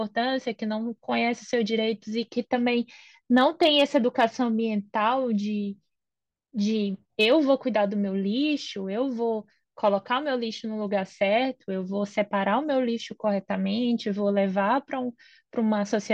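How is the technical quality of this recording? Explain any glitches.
Two short bursts of hard clipping mar the speech. The first runs from 3.37 to 4.25 s, the second from 7.21 to 7.51 s. In both, the signal was pushed past what a stage in the chain could pass, by about 3 dB and then about 2 dB. The waveform peaks are sliced flat. Those flat tops add harmonics high in the spectrum. The result is a gritty crackle on the loudest syllables in each span.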